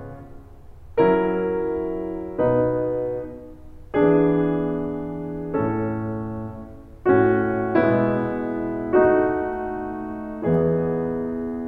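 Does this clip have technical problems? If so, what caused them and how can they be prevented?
No, no technical faults heard.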